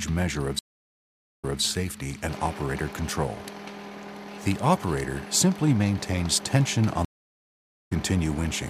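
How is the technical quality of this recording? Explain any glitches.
The recording has two stream reconnects, one near the start and one near the end. Each is a dropout followed by a jump in the audio's timeline.

At 0.59 to 1.61 s there is about 0.82 s of silence. The sound then resumes about 0.21 s earlier than where it broke off, so a short stretch repeats. At 7.05 to 7.93 s there is a similar silence of about 0.84 s. This time playback picks up roughly 0.7 s later, so a piece of the audio is simply missing.

The mechanism is the same both times. The connection dropped, the player went quiet while it reconnected, and then it started a new decoder partway through the stream. In the first case the server resent a burst from slightly before the break, which is why material repeats. In the second case the stream carried on without the player, so the gap skips ahead. Because the new decoder starts cold, its first frame or two come out muted or fading in, which softens the onset after each gap.

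On a waveform, each event shows as a flat line of almost a second, followed by a short ramp up rather than an instant return to full level. On a spectrogram, each shows as a blank vertical band across all frequencies. The energy pattern on either side of the band doesn't line up, because the audio resumes at a different point.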